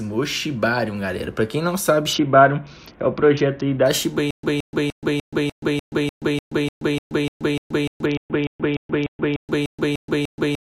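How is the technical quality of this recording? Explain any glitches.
The recording has clear technical problems: two Bluetooth bandwidth drops and a stutter that persists to the end.

A Bluetooth SBC bit pool drop occurs from 2.13 to 3.86 s and again from 8.06 to 9.40 s. The treble dulls and gritty noise appears, which fits the link cutting the bit pool from 28 to 6 (about 60 kbps). With so few bits, the upper sub-bands are starved and the remaining bands are coarsely quantised.

A stutter with silent gaps starts at 4.31 s and lasts to the end. A 170 ms fragment repeats every 297 ms with 127 ms of digital silence between repeats, 21 times in all. This is likely a stalled stream replaying its last buffer on each retry, so the intended audio is lost.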